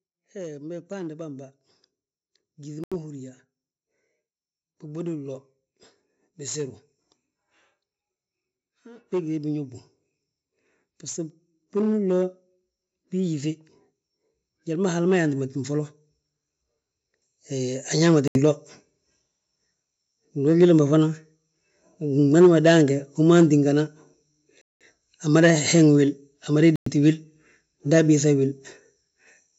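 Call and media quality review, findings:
Automatic gain rising, 0.2 to 22.16 s: speech and background noise floor swell together, about 21 dB overall, in a slow steady ramp. The call chain's AGC keeps lifting gain on quiet input. Unlike a talker moving closer, the room noise climbs by the same amount as the speech.

Bluetooth stall, dropouts to silence at 2.84, 18.28, 24.61 and 26.76 s, lasting 79, 75, 193 and 107 ms. Likely cause is interference holding up packets, so the headphone buffer runs dry until the resends arrive. The gaps are silence.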